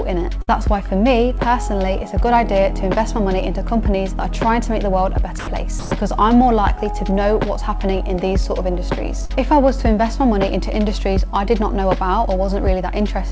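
At 0.42 to 0.49 s there is a burst of packet loss. About 60 ms of audio never arrived in time, and the receiver covered roughly 54 ms of it by extending the last sound it had and fading it down. The result is a short held, dulling tail instead of fresh content. When playback picks up again, the material that belonged in that stretch is gone, so the sound jumps forward slightly.

Two dropouts follow, at 5.39 to 5.47 s (80 ms) and 5.79 to 5.91 s (120 ms). In each, the sound gives way to a flat, steady noise bed and then returns. This is likely sound dropped by the voice detector. The sender judged a quiet stretch to be background and stopped transmitting, and the receiver substituted comfort noise for the real signal, so the original content in both spans is lost.

At 9.25 to 9.31 s there is a short concealed packet loss. About 40 ms went missing, and roughly 39 ms of it was synthesised by continuing the preceding sound and crossfading back into the real audio. 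It comes across as a brief smear or wobble rather than a clear gap. All of this sits on a call path with no content above 8 kHz, consistent with a 64 kbps G.722 link.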